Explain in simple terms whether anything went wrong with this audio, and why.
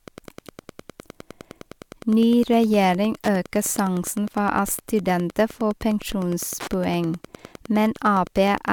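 A faint, steady ticking runs under the speech from start to finish, roughly ten ticks every second, one every 102.4 ms. This is Wi-Fi interference: a wireless radio sitting near the audio equipment sends out a regular timing signal, and the circuit picks it up as clicks. It sits well below the voice but stays audible. Mains hum is a smooth tone, and mobile-phone interference is a fast, bursty buzz. This is an evenly spaced tick.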